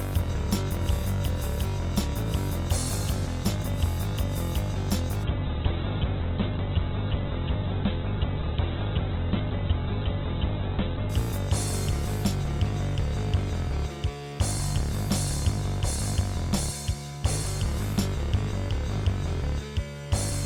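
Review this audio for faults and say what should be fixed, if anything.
From 5.24 to 11.17 s there is a call bitrate drop. The encoder starves, and the sound turns coarse and muffled as the top band falls from 20 kHz to 4 kHz, which fits a fall from 48 to 8 kbps. On a spectrogram, everything above 4 kHz goes blank for nearly 6 s. To prevent it, let bandwidth estimation recover faster or hold a higher minimum bitrate.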